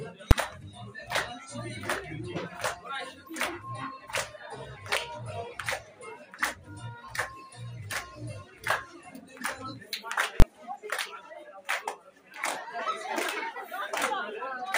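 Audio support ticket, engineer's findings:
Invalid numbers at full scale, 0.31 s and 10.40–10.42 s. Single bang at 0.31 s; second block about 21 ms, hard pop at each edge. Likely DSP stage producing infinite/invalid values clamped to full scale per block, fitting 256-sample and 1024-sample blocks.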